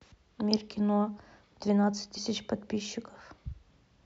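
At 2.16 s the speech jumps forward as compressed frames are skipped: about two 26.1 ms frames, roughly 50 ms of audio, never play. Overlapping neighbouring frames blur the join into a short smeared blip, not the hard click of a sample-level dropout.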